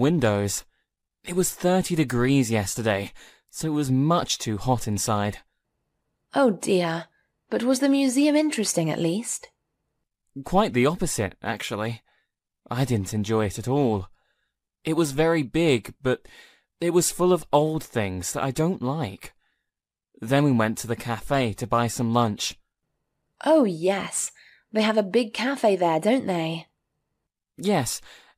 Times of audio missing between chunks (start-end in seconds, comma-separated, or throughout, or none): none